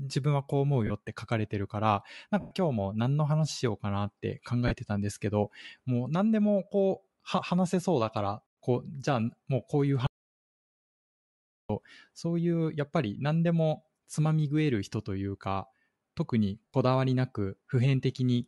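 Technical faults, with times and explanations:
Throughout: Bluetooth LC3 compression. The speech has a breathy, grainy edge, most likely from the LC3 codec used by Bluetooth LE Audio. The damage is plainly audible and fits a rate near 48 kbps with 10 ms frames. The upper spectrum is partly zeroed and refilled with noise. On a spectrogram the high band looks patchy and speckled instead of smoothly structured, and it changes in steps at the frame rate.
0.87 s, 2.40–2.51 s, 4.68 s, 16.70–16.74 s: lost LE Audio frames. Brief stretches of about 30, 110, 30 and 70 ms are replaced by a noisy smear. The decoder repeats the last spectrum with random signs, so pitch and detail dissolve into hiss-like texture. The longer 110 ms gap also sags in level as the concealment fades. On a spectrogram the harmonics blur into flat, grainy blocks, and the waveform shows a rough, shrinking patch.
10.07–11.70 s: audio dropout to silence. 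For about 1.63 s the speech cuts off abruptly and leaves dead silence, with no room tone at all. The input was likely lost, and the recorder kept writing silence. Whatever was said in that gap is gone, and the sound resumes mid-flow. The waveform shows a flat line with hard edges, and the spectrogram shows a dark column across every frequency.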